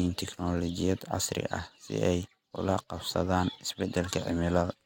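Speech recording, no technical faults detected.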